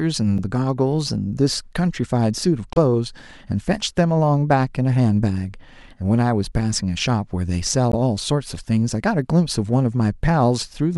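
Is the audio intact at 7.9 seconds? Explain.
No. From 7.92 to 7.94 s there is damaged data in the compressed stream: the decoder misreads corrupted frames and loses sync, producing a brief chirp, squawk, click or short hole.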